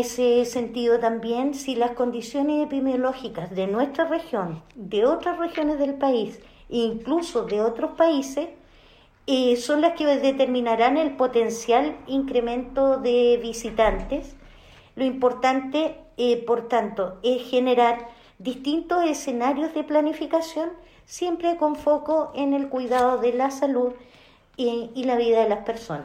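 No technical faults can be heard anywhere in the clip.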